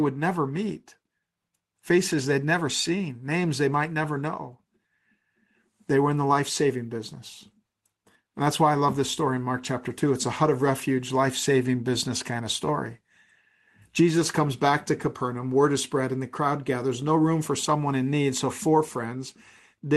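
Nothing stood out on listening to this speech recording.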